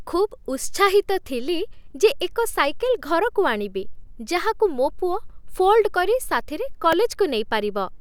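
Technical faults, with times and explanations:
6.92 s, repeated buffer: just after "ପୁଅ ଫୋଲ୍ଡ କରି ସାଥିରେ", a piece about 1.3 ms long, which fits a 64-sample buffer, plays twice more when fresh audio arrives late, costing roughly 3 ms. It sounds like a click. The waveform shows identical repeated cycles with hard joins, and the spectrogram shows a thin vertical broadband line.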